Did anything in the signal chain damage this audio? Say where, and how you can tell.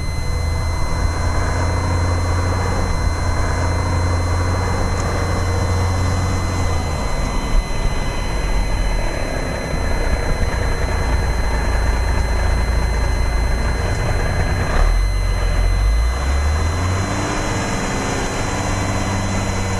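Yes. A switching power supply in the analogue stage is leaking its regulation cycle into the audio path, producing a switching supply whistle that runs for the whole clip. It sits as a thin, high tone drifting between about 2.02 and 2.07 kHz, roughly 20 dB below the programme. The wandering pitch is the tell: the supply's burst-mode rate shifts as its load changes, rather than holding at a fixed mains-related frequency.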